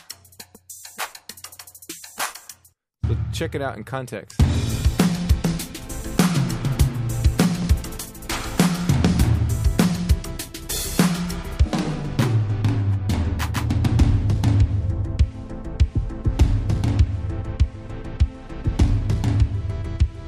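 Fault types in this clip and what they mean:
No faults can be heard anywhere in this clip. There is nothing to list for it.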